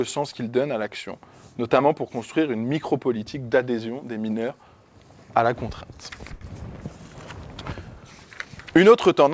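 At 6.34 s there is a short stall from a late packet, lasting until about 6.43 s. A packet arrived after it was due, and the jitter buffer ran dry. The receiver held the last bit of sound for 70 ms instead of going silent. Nothing is lost. Playback picks up where it stopped, now 70 ms later. The held sound has a slight buzz or dip. Nothing is heard above 8 kHz, which fits the G.722 codec on the call path.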